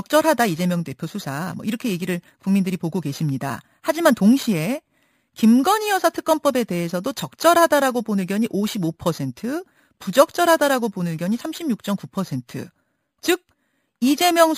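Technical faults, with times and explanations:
Throughout, imaging from sample-and-hold upsampling: each sample was simply repeated with no smoothing, which fits an 11 kHz original, so mirrored copies of the speech spectrum sit around 5.5 to 11 kHz, about 18 dB down. They come across as a metallic fizz that rises and falls with the speech.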